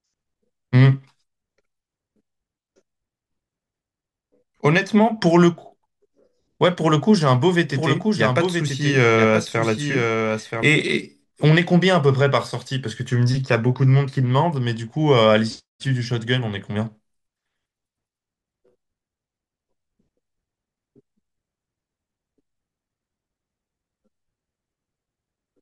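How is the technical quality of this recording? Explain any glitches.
The recording has one clear glitch, a doubled audio track.

From 7.71 s to 10.63 s, the speech is likely being picked up a second time through a slower path, so a second full-band copy gets mixed in roughly a second behind the original. That copy sits a few decibels lower, around 5 dB down, with no decay or room colour. It cuts in and out abruptly, so the speech overlaps with itself in a dry, out-of-step echo.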